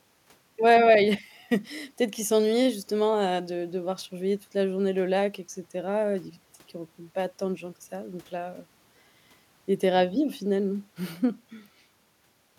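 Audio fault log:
No fault is heard in this speech.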